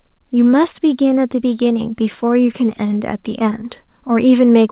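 No technical faults can be heard in this speech.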